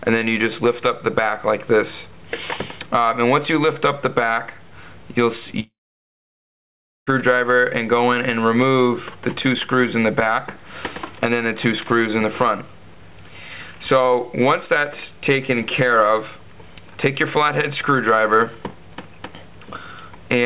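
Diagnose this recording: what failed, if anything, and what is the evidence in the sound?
A long network dropout is the likely cause of the gap from 5.6 to 7.10 s, at the network stage. The last sound is stretched into a brief fading buzz or hiss, then about 1.33 s of silence. Audio resumes with roughly 1.47 s missing, not delayed. A driver underrun would instead click and pick up where it stopped. Around it, the G.711 call audio stops at 4 kHz.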